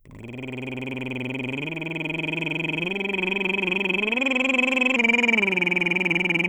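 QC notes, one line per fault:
4.96 to 6.48 s: wrong sample rate. The music slows to about 0.92 times normal speed and drops about 1.5 semitones in pitch, both shifting together. This fits 48 kHz material being played at 44.1 kHz with no conversion, stretching every waveform uniformly.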